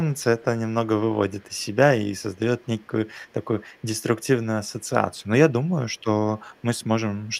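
From 0.14 to 0.45 s, 1.29 to 1.76 s, 2.16 to 4.27 s, 4.65 to 6.04 s, 6.35 to 6.86 s and 7.23 s to the end, there's an echo leak: a faint copy of the speech trailing about 207 ms behind, roughly 35 dB down (nearer 40 dB at the end). It's likely a far-end loudspeaker whose echo canceller let some of the pickup slip back.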